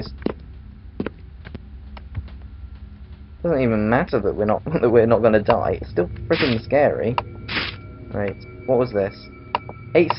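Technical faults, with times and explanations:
No technical faults can be heard anywhere in the clip.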